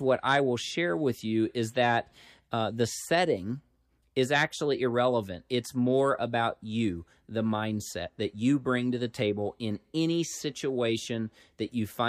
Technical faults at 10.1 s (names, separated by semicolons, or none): none